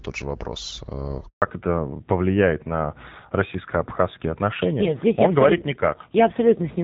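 At 1.28 s, just after "же вопрос э", the call was handed from one network to another and no speech frames arrived during the switch. The sound dies away almost at once and stays silent for 140 ms, until 1.42 s, and whatever was said in that gap is lost.

When the link resumes at 1.42 s, there is a fallback to narrowband: the call leaves HD Voice, whose light coding up to that point fits AMR-WB at about 12.65 kbit/s, for an older narrowband codec, which fits AMR-NB at around 7.4 kbit/s. From there to the end, nothing above 4 kHz remains, so the speech sounds duller and rougher.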